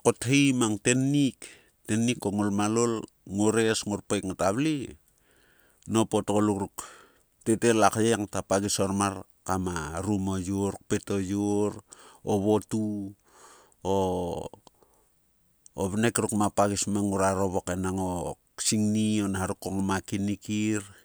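No technical faults can be heard anywhere in the recording.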